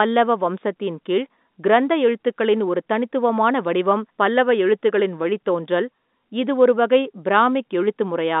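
There are no technical faults to describe at any point in the speech, which carries the narrow band of an ordinary telephone line.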